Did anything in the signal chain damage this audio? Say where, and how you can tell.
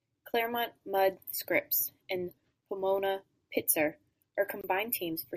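Yes. There is a gap at a join of encoded pieces, at the codec stage. At 4.61 s the speech drops into a 25 ms silence, ending at 4.64 s. The edges are smeared by the codec. Separately encoded segments were joined without trimming their padding and start delay.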